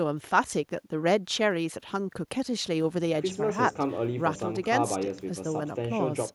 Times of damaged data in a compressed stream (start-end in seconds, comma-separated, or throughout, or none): none